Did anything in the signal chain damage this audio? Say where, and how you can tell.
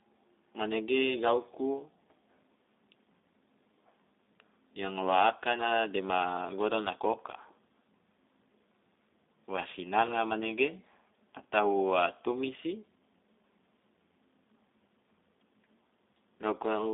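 Yes. The damage happens at the codec stage and runs through the whole clip. This is G.729 codec coding, most likely the G.729A variant. Nothing passes above about 3.8 kHz, and the low end stops near 300 Hz, so the sound is held in a narrow telephone band. The speech sounds rough and slightly synthetic. That roughness fits an 8 kbit/s coder. It rebuilds each 10 ms frame from a vocal tract filter, a pitch predictor and a few pulses, rather than keeping the waveform.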